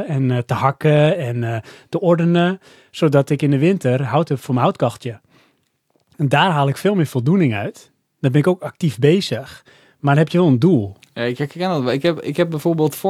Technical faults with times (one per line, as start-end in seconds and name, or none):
none